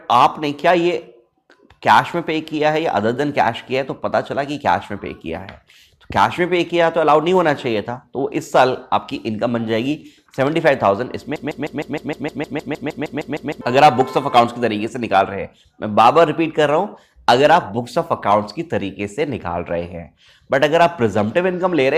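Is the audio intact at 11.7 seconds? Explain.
No. A broken-record loop from 11.36 to 13.61 s repeats one identical 0.15 s fragment fifteen times, likely a stalled stream, with no decay, unlike echo.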